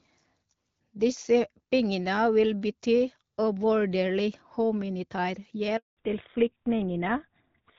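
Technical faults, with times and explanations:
5.77 to 5.97 s, handover gap: right after "vil bety uvurderlig humanitær" the speech cuts out within a few tens of milliseconds and stays dead for about 200 ms. That's the call being passed from one network to another, with no speech frames arriving during the switch. Whatever was said in that window simply never reached the far end. The silence ends when the new link comes up.
5.97 s to the end, fallback to narrowband: coming out of that gap the audio loses everything above 4 kHz. Before the handover, the HD Voice sound fits AMR-WB at around 12.65 kbit/s, with only light codec damage. Afterwards, the duller, rougher character fits a drop to GSM full rate at around 13 kbit/s. The bitrate barely changes, but the older codec can't carry the upper band.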